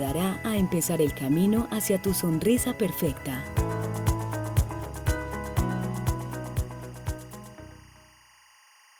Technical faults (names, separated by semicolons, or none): timecode bleed